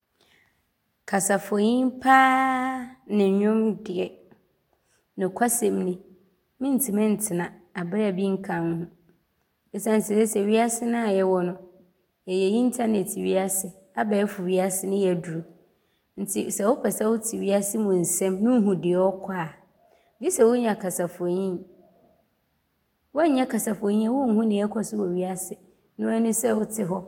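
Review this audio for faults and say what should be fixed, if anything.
Nothing needs fixing in this speech recording, as no technical faults can be heard anywhere in it. No repair or change to the capture chain is called for.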